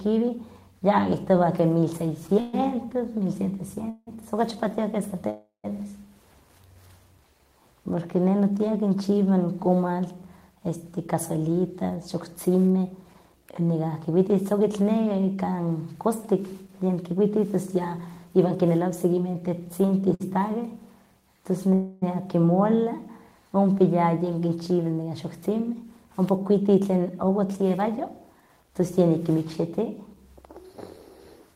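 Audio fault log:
2.27–4.09 s, repeated stalls (stutter): after "ya kitowah ke mil" three gaps, the longest 170 ms, are bridged by holding the last sound. Nothing is lost, but the sound drags in fits, unlike one single freeze.
5.30–5.66 s, call audio freeze: a 340 ms hold fades into 120 ms of silence, then the sound resumes intact, likely from packets held up in transit. It is one long gap rather than repeated stalls.
10.86–19.35 s, jitter buffer speed-up: the sound runs 6% fast at unchanged pitch as roughly half a second of pitch-period slices is trimmed to shrink an overfull buffer.
20.14–20.22 s, short stall from a late packet: a 56 ms stretch of the last sound covers one late packet. It is too brief to fade the way a freeze does.
21.74–22.04 s, call audio freeze: the last sound is stretched for 280 ms without reaching silence, likely while delayed packets caught up, then the sound continues from where it stopped.
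24.47–28.71 s, jitter buffer speed-up: after "ompa yayin" the sound hurries 6% with its pitch intact, roughly 0.3 s removed, unlike a playback-rate change that would raise the pitch.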